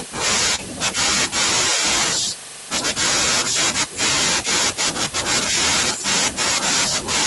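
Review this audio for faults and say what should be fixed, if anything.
There's one short concealed packet loss, from 0.55 to 0.60 s in this speech. About 20 ms of audio never made it to the decoder in time, so the receiver patched the gap by extending the sound that came before it, roughly 28 ms of filler, then blended back into the real signal. You hear a brief smear right there. To prevent it, give the jitter buffer a bit more headroom or add forward error correction so a lost packet can be rebuilt.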